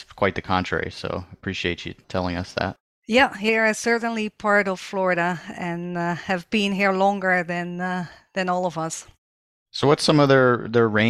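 No technical faults are audible.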